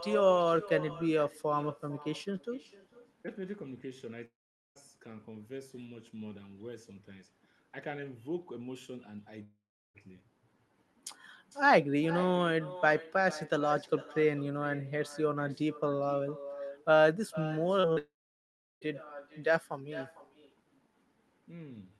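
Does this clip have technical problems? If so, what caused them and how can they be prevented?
Yes. Echo with no canceller runs through the whole clip. Each phrase returns roughly half a second later, about 15 dB quieter and thin. The far end's loudspeaker feeds its microphone, and nothing subtracts it. Enabling acoustic echo cancellation, or using headphones, prevents this.

There are three long gaps, at 4.25 to 4.77 s, 9.43 to 9.96 s and 17.98 to 18.87 s. Each begins with a short fading buzz of continued sound, then falls silent, and audio resumes with that stretch missing. The likely cause is a long network dropout. A more stable connection prevents it.

Short concealed packet loss occurs at 17.80 to 17.87 s and 17.93 to 17.98 s, just before the third gap. About 40 ms is lost each time. The receiver fills the holes with synthesised continuation, heard as brief smears. Reducing network jitter and packet loss prevents it.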